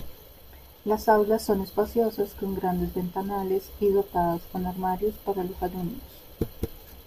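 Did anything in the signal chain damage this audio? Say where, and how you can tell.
No, nothing in the chain.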